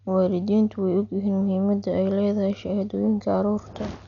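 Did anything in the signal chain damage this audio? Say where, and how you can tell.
Yes, at the codec stage, most likely Dolby Digital compression, present throughout the speech. The band stops dead at about 6.9 kHz, so the sound is dull, and a rough, fluttering noise clings to tonal parts. That pattern fits an AC-3-style encoder run at a low bitrate, around 48 kbps. It narrows the bandwidth and starves many frequency lines of bits, and the decoder fills them with dither noise. The damage is heavy.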